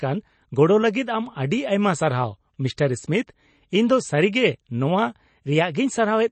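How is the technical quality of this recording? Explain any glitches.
The recording is held back by plainly audible codec damage from start to finish. The speech has nothing above 8.3 kHz and a watery, swirling texture, most likely from MP3 compression at a low bitrate around 32 kbps. Short of bits, the encoder cuts the treble at a fixed point and drops weak frequency lines that flicker frame to frame. A simple low-pass filter would dull the sound without that swirl or the metallic chirps on s sounds.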